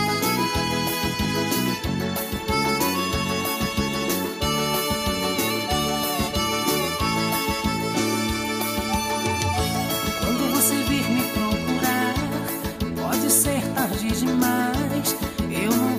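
Nothing stood out as a technical problem on listening to this audio.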